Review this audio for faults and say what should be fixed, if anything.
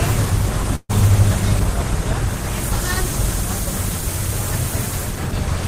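A burst of packet loss occurs from 0.75 to 0.91 s. The receiver extends the preceding sound for about 137 ms, fading it out into roughly 40 ms of near-silence, and the audio resumes with about 140 ms of the original missing. Forward error correction and a deeper jitter buffer would prevent this.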